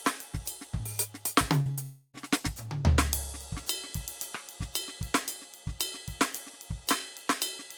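At 1.61 to 1.68 s, a short concealed packet loss means about 40 ms of music never reached the decoder in time. The receiver extended the preceding sound to fill the gap, producing a brief smear before the real audio blends back in.

At 1.71 to 1.79 s, a burst of packet loss removes about 60 ms of consecutive audio. The receiver continues the last sound and lowers it as the gap runs, then the music resumes slightly further on.

From 1.83 to 2.16 s, the likely cause is a long network dropout. For about 0.3 s the last sound is held and fades without reaching silence, then the music returns with roughly 300 ms lost.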